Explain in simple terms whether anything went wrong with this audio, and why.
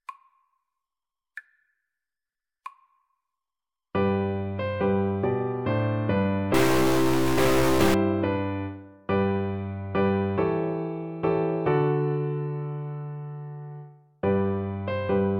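From 6.54 to 7.94 seconds the sound turns harsh and buzzy, with a gritty rasp running through it, and any quiet moments in that stretch fill with a noticeable hiss instead of staying silent. This is a stuck bit. A recording stores each moment of sound as a number, and here one digit of those numbers was likely jammed at a fixed value by a faulty connection or converter. That digit is a fairly significant one, so the error it causes is large.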